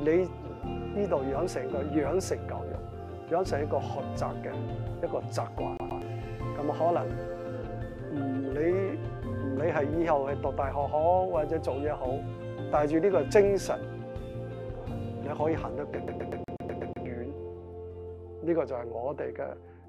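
A scratch throws the laser back a track, a CD stuck on one turn: a 0.12 s fragment repeats twice from 5.77 to 6.02 s, then eight times from 16.08 to 17.06 s, stuttering with brief mutes.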